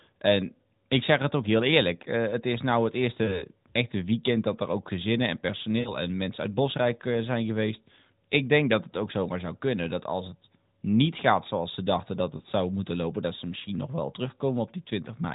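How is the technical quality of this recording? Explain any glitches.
The recording is narrowband AMR mobile speech, lightly coded, consistent with the 12.2 kbps mode, and has three short dropouts. Lost AMR speech frames occur at 3.24–3.44 s after "het is nou het", 5.80–5.94 s after "er ook gezinnen en", and 12.38–12.42 s after "zoals ze dachten dat". Corrupted frames were concealed by repeating the previous speech parameters at falling gain, heard as brief smeared, fading gaps.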